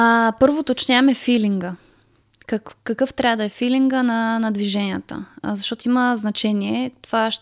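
Speech recording; no technical faults are audible anywhere.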